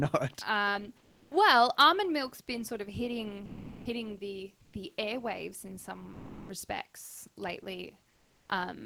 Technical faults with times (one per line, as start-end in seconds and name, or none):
0.97-1.31 sound dropped by the voice detector
3.45-3.85 sound dropped by the voice detector
4.65-4.73 comfort noise in place of the background
6.13-6.49 sound dropped by the voice detector
8.09-8.49 comfort noise in place of the background